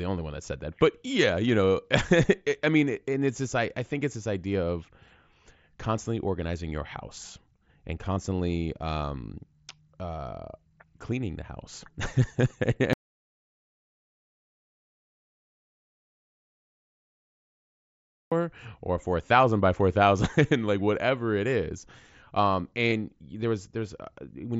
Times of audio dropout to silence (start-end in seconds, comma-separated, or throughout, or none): 12.93-18.32